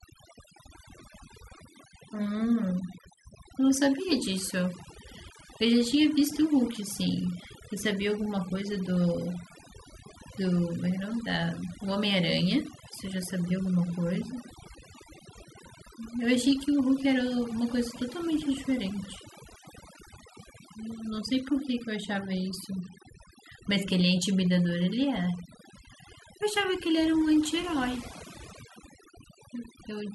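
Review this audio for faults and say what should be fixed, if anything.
Across the whole recording the gaps between phrases drop to an unnaturally dead silence sprinkled with twinkling, chirping specks. This is overdone noise removal: the noise reduction was pushed so hard that any frequency band sitting close to its noise estimate gets pulled far down or cut entirely. Quieter parts of the voice are swept away too, and the isolated bands that survive flicker as those specks. To prevent it, apply gentler reduction and stop well before the background goes fully silent.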